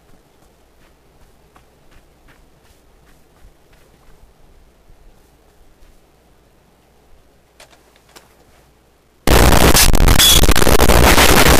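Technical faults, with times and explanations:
9.27 to 11.59 s, signed and unsigned mixed up: the 8-bit samples were likely read with the wrong sign convention, flipping the top bit so each zero crossing jumps across the full range. The final stretch turns into loud, harsh distortion, with quiet moments as loud as everything else.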